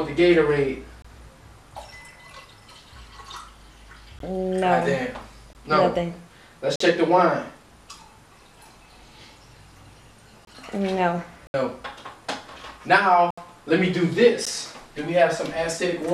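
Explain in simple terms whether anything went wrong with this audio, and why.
Something went wrong. The sound drops out in blocks of digital silence at 1.02–1.05, 4.19, 5.53, 6.76–6.80, 10.45–10.47, 11.47–11.54, 13.31–13.38 and 14.45 s. Each drop is total silence that starts and stops abruptly. The shortest ones sound like ticks, and the 70 ms drops sound like small holes. The likely cause is the playback program running late and sending out nothing. Some gaps are exactly the length of one or two 1024-sample chunks.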